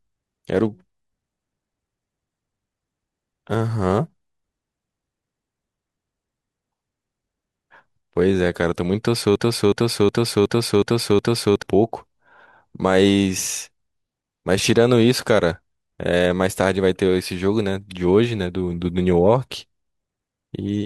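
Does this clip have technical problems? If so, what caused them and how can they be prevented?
Yes. A broken-record loop from 9.36 to 11.62 s repeats one 367 ms fragment six times, likely a stalled player or stream. A spectrogram shows identical blocks every 0.37 s. Adequate buffering and stall detection in the playback or streaming chain would prevent it.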